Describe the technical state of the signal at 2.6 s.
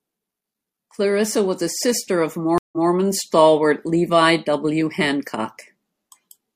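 At 2.6 s the connection drops and the player reconnects with a fresh decoder, a stream reconnect spanning 2.58 to 2.90 s. The speech cuts to about 146 ms of silence, then resumes 171 ms earlier, repeating a short stretch just heard.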